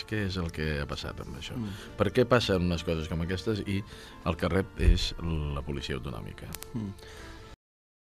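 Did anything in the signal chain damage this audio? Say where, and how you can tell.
Yes. The audio has a cut-off end at 7.54 s, a fault in the buffer or storage stage. The sound stops abruptly mid-event and drops straight to digital silence, which lasts to the end of the file. There is no natural decay or fade. The final buffers of the recording were never written out or played back, so the waveform is truncated instead of ending where the sound itself finished.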